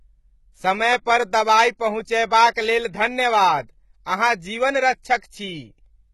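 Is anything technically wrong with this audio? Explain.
Yes, there are two faults. Throughout the speech there is heavy HE-AAC compression, with heavy codec damage. The likely cause is an HE-AAC encoder running at a very low rate; the damage fits a bitrate of around 16 kbps. The encoder codes only the lower spectrum and synthesises the treble by spectral band replication, copying lower bands upward under a coarse envelope. Those rebuilt highs don't match the real harmonics, so sibilants come out gritty, metallic and lisped, and nothing reaches above 11.8 kHz.

From 5.18 to 5.22 s there is pre-echo. The transform coder spread its quantisation noise across a whole block, and because a sharp attack sat late in that block, noise sized for the loud onset also filled the quiet gap before it. The result is a short hiss running about 45 ms ahead of the attack, which makes the onset sound softened and smeared rather than crisp.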